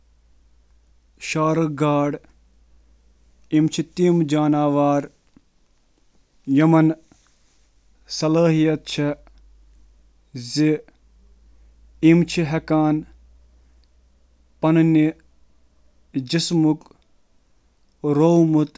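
No technical faults can be heard anywhere in the recording.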